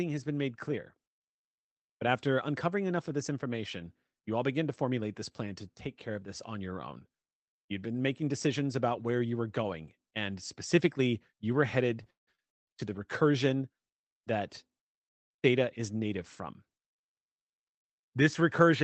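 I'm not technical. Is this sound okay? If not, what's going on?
No. Between 12.03 and 12.69 s there are repeated stalls (stutter): the call's audio arrived late, so playback paused four times, the longest about 0.19 s, and the last sound was stretched to fill the gaps. Nothing is lost, but that stretch drags and stutters.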